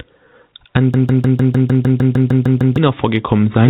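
From the first moment to the end, the speech shows gain pumping. The gain swings by around 10 dB, so loud and quiet passages sit unnaturally close in level. The likely cause is gain set far too high ahead of a fast limiter or compressor. On a waveform the envelope looks flattened. On a spectrogram the speech sits within a narrowband picture that stops at 4 kHz.

From 0.94 s to 2.78 s a broken-record loop takes over. A fragment about 152 ms long plays back to back, identically, twelve times, giving a stuttering, machine-like repetition, and the speech that should have filled those 1.8 seconds is gone. This likely comes from a stalled player, encoder or stream that kept resending the last piece it held. On a waveform the same short shape tiles repeatedly. On a spectrogram an identical block repeats at a steady rate of about 6.6 per second.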